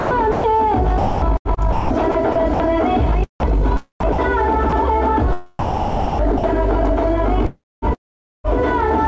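The sender's voice detector likely kept switching transmission on and off, chopping the sound at 0.00–0.44 s, 0.98–3.63 s, 4.00–4.18 s, 5.28–6.91 s and 7.46–8.50 s. Between about 0.09 and 0.86 s of each stretch became comfort noise, so the sound stutters.

Within and near the chopped stretches, the same detector likely misread brief quiet sound as background and stopped sending. That dropped 30 ms at 3.40–3.43 s and again at 4.69–4.72 s. Each gap becomes a short patch of steady comfort noise before the sound resumes, all below the G.722 call path's 8 kHz ceiling.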